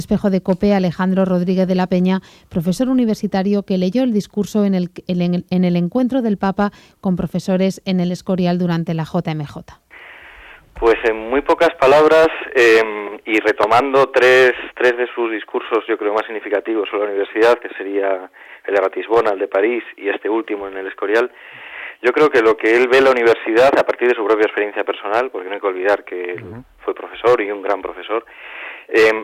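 Hard clipping runs through the whole recording. The signal was driven roughly 10 dB beyond what a stage in the chain could pass, so peaks are sliced flat, around 2 percent of samples. Those squared tops add high harmonics, heard as harsh crackle on louder moments.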